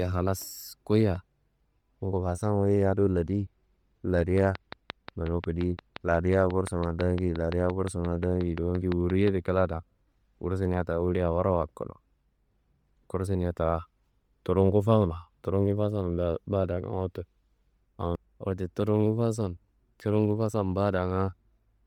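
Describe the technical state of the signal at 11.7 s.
At 11.7 s the speech carries heavy Bluetooth LC3 compression damage, present throughout, likely from 32 kbps coding in 10 ms frames: upper bands are zeroed and noise-filled, sounding breathy and grainy, with smeared, blocky highs on a spectrogram.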